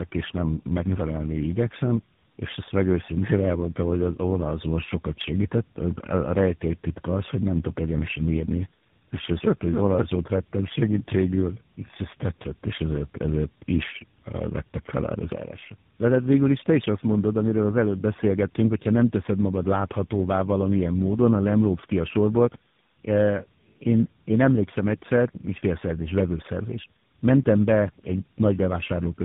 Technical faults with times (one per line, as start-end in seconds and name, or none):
0.00-29.25 tandem speech coding